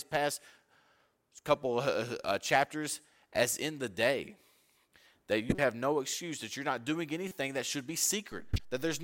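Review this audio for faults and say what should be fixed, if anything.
Corrupt frame decoded faults occur at 5.49–5.63 s, 7.28–7.34 s and 8.53–8.60 s in this speech clip. Each is a short burst of misplaced energy. Flipped bits in the compressed stream made the decoder apply wrong gains and spectral codes. The first burst is the loudest, peaking around −15 dBFS, and spans what sounds like a handful of frames. The later two peak around −30 and −20 dBFS and sound like a couple of frames each. Enable checksum or CRC validation so damaged frames are concealed rather than played.

A DC step begins at 8.32 s and holds to the end of the clip. The waveform's zero line jumps abruptly and stays offset, producing a low thump at the onset while the speech continues unchanged. This points to a converter recalibrating or an offset-carrying input being switched in mid-recording. Apply a high-pass or DC-blocking filter in the input chain and avoid switching sources while recording.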